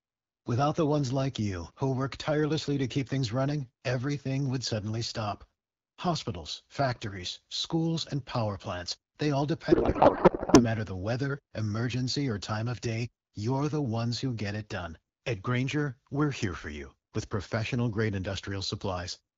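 From 9.71 to 10.64 s, between "power plants they all" and "the weather emergency or", the speech gives way to garbled noise and warble that barely tracks it. This is a codec payload misread, which points to octet-aligned AMR-WB frames being unpacked as bandwidth-efficient.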